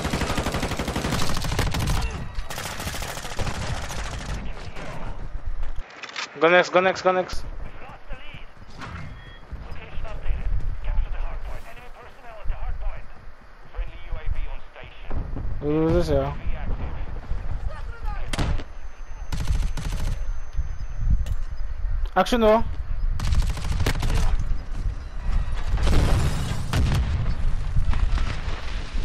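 At 5.81 s the sound turns dull and a few decibels quieter, with nothing above 7.6 kHz. Faint new background noise sits far below it. No gap marks the change. It clears at 7.33 s. The likely cause is an input switched to a poorer device.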